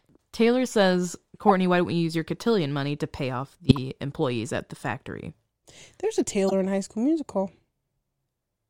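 Corrupt frame decoded at 1.48–1.51 s, before "why don't we use"; at 3.69–3.79 s, between "money to pay off" and "employees at the factory"; and at 6.49–6.53 s. Each time, a damaged compressed frame was played anyway, putting energy at the wrong frequencies. On a spectrogram each event is a brief vertical patch out of place with the surrounding pattern, and in the waveform a short burst. The burst is largest at 3.69 s and smallest at 6.49 s.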